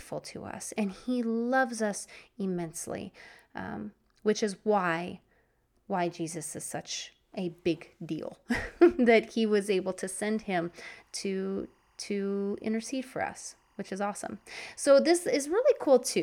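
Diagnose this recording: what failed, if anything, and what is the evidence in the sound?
Timecode bleed in the analogue wiring stage. From 10.12 s, just after "was able to", and continuing to the end, a faint chirping warble sits roughly 40 dB below the speech, flipping between pitches near 1 and 2 kHz. Linear timecode from an adjacent track or cable is leaking in. Its pattern repeats at a frame rhythm consistent with 23.976 fps code. A steady whine or ground hum holds one pitch, while this alternates in a rhythmic, data-like way.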